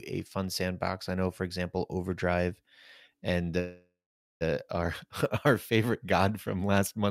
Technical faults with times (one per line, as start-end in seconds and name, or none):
3.59-4.43 call audio freeze